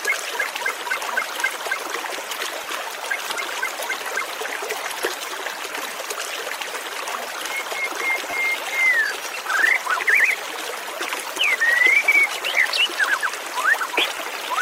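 At 2.64 s a repeated buffer is heard as a brief click. New audio arrived late, so the last short block played once more. From 8.31 to 8.33 s it repeats twice, a tiny buzz. Each repeat fits a 10 ms buffer.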